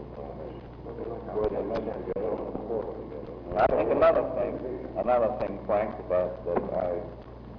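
No technical faults are audible anywhere in the recording.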